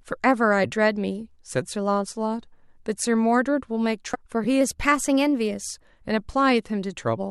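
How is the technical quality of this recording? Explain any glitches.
Two separate glitches stand out, about half a second apart in the second half of the recording.

At 4.14 to 4.16 s there is a brief glitch of damaged data in a compressed stream. Some of the encoded bytes there were corrupted, so the decoder misread those frames, lost its place, and hunted for the next valid frame header before it could resume. That produces a short disturbance lasting about 22 ms.

From 4.61 to 5.85 s the speech plays 5.8% fast and sits about 98 cents sharp, almost a full semitone. At 5.85 s it snaps back to normal. This is likely a drift correction step, where software reconciling two clocks changed the playback rate in one jump to rebalance its buffer. Speed and pitch move together here, which sets it apart from a pitch-only processing error. The abrupt start and stop also distinguish it from gradual wow or flutter, which would waver continuously.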